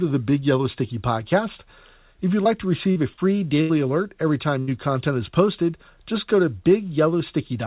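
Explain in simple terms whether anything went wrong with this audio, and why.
Short concealed packet loss at 2.44, 2.91 and 3.14 seconds: tiny pieces of the call, 20 to 40 ms each, arrived too late. The receiver patched each hole by stretching the sound just before it, so you hear a quick smear or wobble where a brief sound may vanish.

A burst of packet loss at 3.61 to 3.71 and 4.59 to 4.69 seconds: about 80 ms went missing in a row each time. The receiver held the last sound and faded it, giving a short buzz or hiss, then the speech jumps ahead with that piece gone. Through all of this, the phone-style call path carries nothing above 4 kHz.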